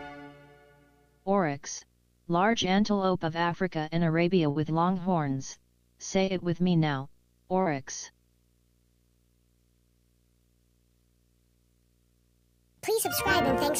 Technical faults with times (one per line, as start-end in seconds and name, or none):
0.00-13.79 video or display buzz
1.78-1.82 short concealed packet loss
2.52-2.54 short concealed packet loss
3.52-3.54 short concealed packet loss
4.50-4.56 burst of packet loss
5.53-5.56 short concealed packet loss
6.24-6.28 short concealed packet loss
7.61-7.67 short concealed packet loss